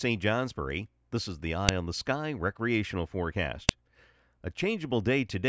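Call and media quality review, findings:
Sharp loud click at 1.69 s, between "this is the" and "on the", and again at 3.69 s; file header played as audio. Probable component: stream or file concatenation. WAV header bytes from each 2 s piece decoded as samples. Waveform: isolated spike about 2 ms long, unrelated to surrounding speech envelope. Spectrogram: thin broadband vertical line across all frequencies. Exact 2 s spacing points to chunk boundaries where headers were not stripped.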